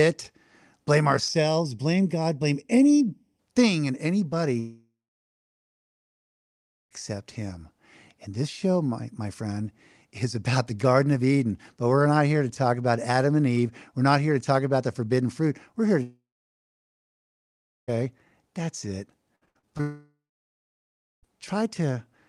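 From 1.28 to 3.39 s there's channel delay (comb filtering): one channel trails the other by under half a millisecond, and summing them cuts notches starting near 1.5 kHz. The speech goes hollow and phasey for those two seconds.

At 4.59 s the sound smears into a fading buzz, then drops to near silence for about two seconds before resuming at 6.93 s with a chunk gone. It's likely a long network dropout. The same happens from 16.03 to 17.90 s, right after "here to".

Between 19.36 and 19.81 s, repeated packet loss (robotic sound) sets in. Five short holes, the longest about 61 ms, get patched with repeated sound, so roughly two-fifths of that span is filler. It comes out choppy.

That leads straight into another stall, likely a long network dropout, from 19.81 to 21.26 s, with a brief fading tail and then about a second of silence.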